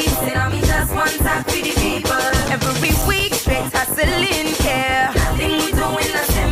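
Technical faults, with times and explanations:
2.12–3.38 s, CD scratch ticks: eight brief ticks, about six per second, each a few milliseconds, as a disc blemish overwhelmed error correction once per revolution.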